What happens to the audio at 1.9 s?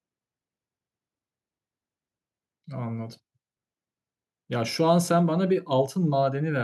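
Nothing goes wrong at 1.9 s: the speech there continues cleanly, with no dropout, click, distortion or other fault to be heard.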